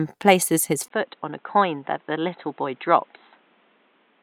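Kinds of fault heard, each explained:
Input switched to a poorer device: just after "places his", at 0.88 s, a 20 ms gap gives way to duller, boxier sound with nothing above 4 kHz, a somewhat lower level and a new faint noise floor, likely from a change to a narrower-band microphone.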